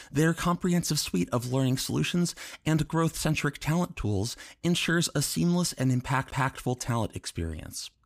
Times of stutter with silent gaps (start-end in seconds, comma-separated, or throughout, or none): none